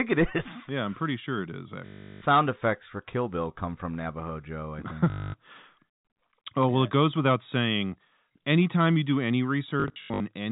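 From 1.86 to 2.22 s, just before "effects for", the speech breaks into a robotic stutter. This is packet loss with the last packet repeated. Audio went missing and the receiver replayed its last packet to fill the gap. The replays don't align with the pitch. A 50 Hz buzz runs through it, which fits 20 ms packets. A shorter stutter follows at 5.1 to 5.34 s. From 9.8 to 10.2 s, after "anytime you do any", losses scatter, the longest lasting 80 ms. All of it is heard through a telephone band capped at 4 kHz.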